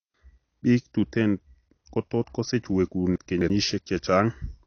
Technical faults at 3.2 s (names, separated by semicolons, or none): AAC compression; chunks out of order